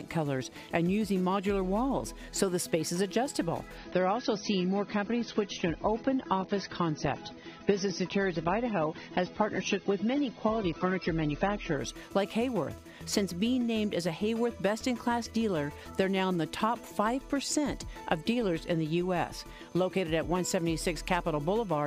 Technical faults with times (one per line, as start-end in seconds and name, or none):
3.78-11.78 adaptive stream at a lower bitrate